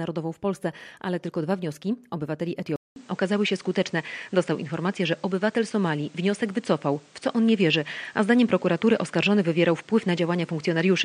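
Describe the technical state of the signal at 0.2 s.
At 0.2 s the signal is intact, with no fault present at that moment.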